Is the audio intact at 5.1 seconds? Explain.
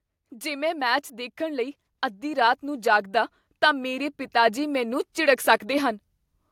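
No. At 5.1 seconds the speech and the background noise behind it are still swelling together, the whole sound growing steadily louder rather than one part standing out. This is automatic gain rising, running from 0.29 to 6.04 seconds: the automatic gain control judged the input too quiet and kept turning its gain up slowly, adding about 10 dB over that span, so at 5.1 seconds the level is near the top of that climb.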